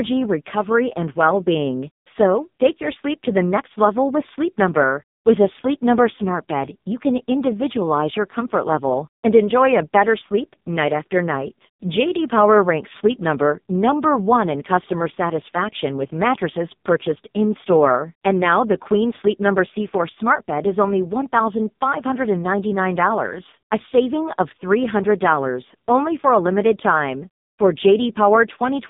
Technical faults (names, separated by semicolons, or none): AMR narrowband mobile codec